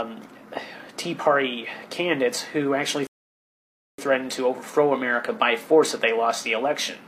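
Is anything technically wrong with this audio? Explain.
Yes. From 3.07 to 3.98 s there's a rebuffering stall: playback starved for data, went silent, then picked up exactly where it stopped, adding about 0.91 s.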